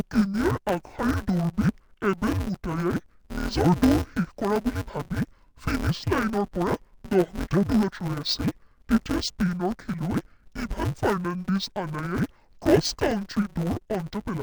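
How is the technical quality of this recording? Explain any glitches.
The recording has one fault present throughout: interleaved audio read as planar. Each 5.33 ms block of alternating left and right samples gets split in halves, making the speech dull and robotic with a 188 Hz buzz. Unlike a pitch shift, the blocks are too short for an audible octave drop.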